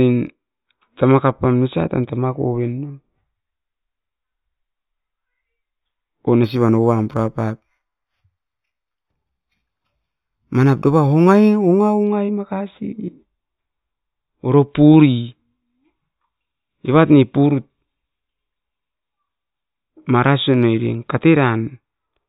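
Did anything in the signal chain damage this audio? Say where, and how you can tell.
Yes. From 6.44 to 12.04 s the speech shows imaging from linear upsampling, introduced at a sample-rate conversion stage. The rate was raised from 8 kHz to 44.1 kHz by joining samples with straight lines. That is a poor anti-imaging filter. The top of the original band sounds dulled, and a faint mirrored copy of the spectrum sits between 4 kHz and 8 kHz, roughly 35 dB below the signal. It comes through as a light metallic shimmer on sibilants.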